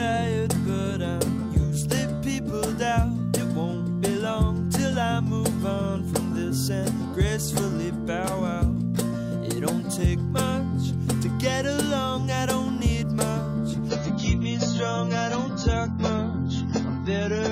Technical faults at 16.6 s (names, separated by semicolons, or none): adaptive stream at a lower bitrate